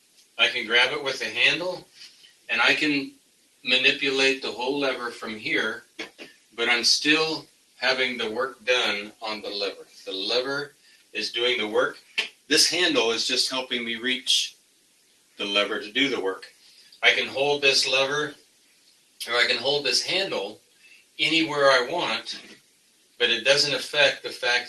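A noise suppressor built for speech stays active across the whole clip and treats steady tones, ambience and reverb as noise. The level swings by around 10 dB as sustained parts sink and attacks pass, which is what separates it from a plain compressor.

The sound cut by the noise suppressor is clearest at 0.0–0.38, 1.84–3.65, 5.82–12.5, 14.52–15.39, 16.45–17.02, 18.34–19.21, 20.57–21.18 and 22.42–23.2 s. Held or fading sound drops by up to about 12 dB (about 11 dB at 16.45 s), and decays are cut short. Unlike a dropout, sudden onsets survive. Through all of this the call path's codec sets a top end near 12 kHz, which fits a low-bitrate Opus setting.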